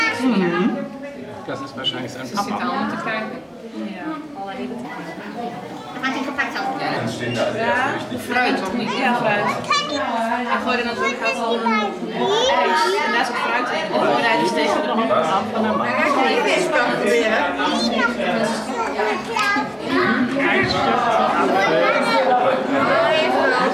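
The audio has a section at the wrong speed from 4.85 to 6.97 s. It runs 1.23 times fast, pitched up about four semitones, likely from a mismatched playback clock.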